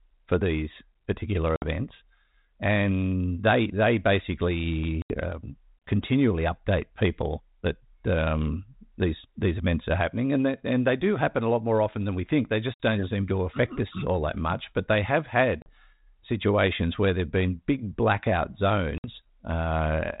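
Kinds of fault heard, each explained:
Packet loss on an ADPCM call: five hard-edged silences of 40 to 80 ms, each a few lost packets, knock the decoder's predictor and step size out of step with the sender's. Unlike a clean dropout, speech resumes slightly distorted, settling within tens of milliseconds.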